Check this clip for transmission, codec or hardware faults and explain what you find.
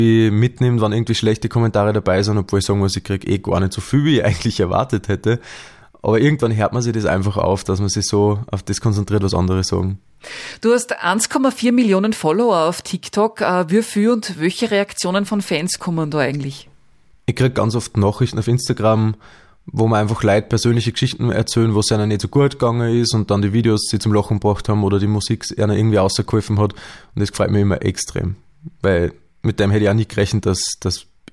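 No faults turn up in this clip.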